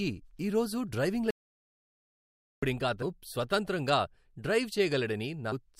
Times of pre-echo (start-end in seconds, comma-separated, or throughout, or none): none